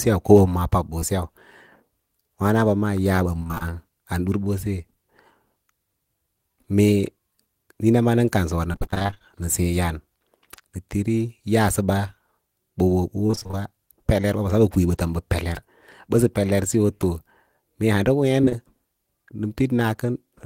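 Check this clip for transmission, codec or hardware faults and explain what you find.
The speech has two kinds of transmission fault, both from lost network packets.

Short concealed packet loss: at 0.99 s, and again from 18.41 to 18.53 s as three back-to-back holes, the sound briefly smears or wobbles. About 20 ms of audio at a time never arrived, which fits 20 ms packets. The decoder extended the preceding sound to cover each gap before blending back.

Repeated packet loss (robotic sound): from 3.40 to 3.62 s, 8.72 to 9.22 s and 13.27 to 13.55 s the speech turns choppy. Gaps of up to 24 ms kept recurring, so roughly half of each stretch is patched continuation rather than real audio.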